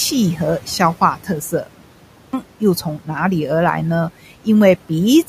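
At 2.0 s, after a pause of about 0.33 s, the speech resumes with a clipped start after a pause. The output path appears to have gone idle during the silence and needed time to wake before passing audio again, so roughly the first 330 ms of sound, up to 2.33 s, never reaches the listener. The word enters abruptly, already mid-sound, with its onset missing. The room noise sits about 20 dB below the speech.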